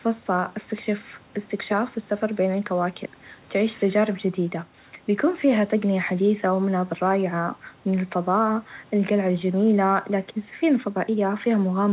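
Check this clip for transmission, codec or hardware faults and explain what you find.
No faults found.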